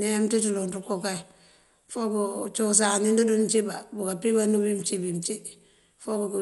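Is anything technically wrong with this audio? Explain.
Yes. Throughout, the speech has the damage of likely Dolby Digital compression at a low bitrate, consistent with about 64 kbps. The encoder discards content above 11.5 kHz and leaves many frequency lines without detail, filling them with noise, so the sound is dull with a rough, fluttering texture around tones.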